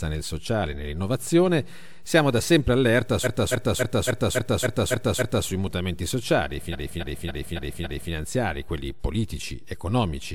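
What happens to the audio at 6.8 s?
At 6.8 s the speech is caught in repeated frames. From 6.71 s to 8.11 s the same 0.28 s block plays over and over, five extra times. The decoder is fed that stretch of compressed data again and again. It sounds like a rapid stutter and adds about 1.39 s.

A DC offset also runs under this moment. The whole waveform sits shifted from zero by a constant amount. You don't hear it directly. It eats headroom and leaves steady energy at the very bottom of the spectrum.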